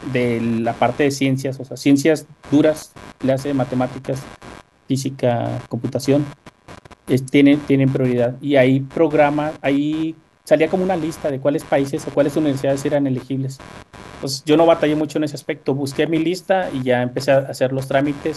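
Computer activity noise runs throughout: processor or peripheral load shifts the shared ground, adding a buzzy chirp near 100 pulses per second, roughly 25 dB below the speech.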